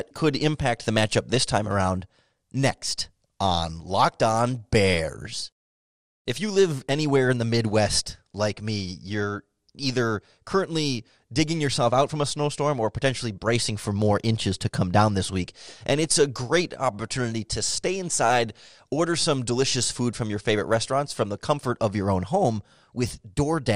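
MP2 compression runs throughout: the speech sounds dull and gurgling, likely from too few bits starving upper sub-bands, consistent with roughly 80 kbps.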